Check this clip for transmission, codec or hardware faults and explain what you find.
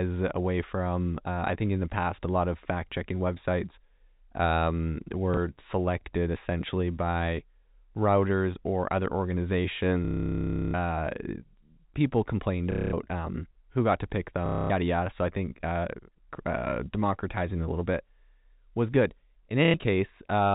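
The speech carries packet loss with last packet repeated, at five points: 5.34–5.37 s, 10.05–10.74 s, 12.72–12.93 s, 14.46–14.70 s and 19.65–19.74 s. Lost audio is filled by replaying the previous chunk until fresh data arrives. Longer gaps buzz robotically near 33 Hz, which fits 30 ms packets. The G.711 telephone coding passes this stutter through.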